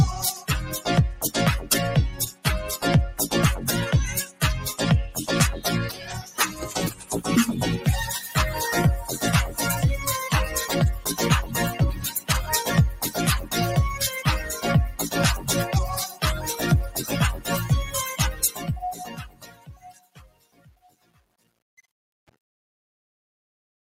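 The level pumps and thins throughout, with held material and tails sinking while attacks come through, a swing of around 10 dB. This is a noise suppressor applied to music or sounds: a processor designed for speech treats sustained, steady content as noise and keeps pulling its gain down, so the audio never settles at a stable level. On top of this pumping there are distinct dips, each a case of sound cut by the noise suppressor. They occur at 2.11–2.46 s (about 13 dB deep), 4.26–4.42 s (about 13 dB), 5.92–6.35 s (about 8 dB), 6.91–7.1 s (about 11 dB), 18.33–18.67 s (about 7 dB), and a long one from 19.01 to 21.5 s (about 13 dB). In each, steady or decaying sound is dragged down or has its decay cut short, while sharper onsets survive. The fade-out from about 18 s to 23.9 s turns gritty from 18.21 s and is worst from 18.81 s to the end at 23.92 s. This is truncation distortion on a fade, which fits a gain stage working at 8 bits with no dither. 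As the level falls toward the smallest step, the waveform collapses into a few coarse square steps instead of tapering away.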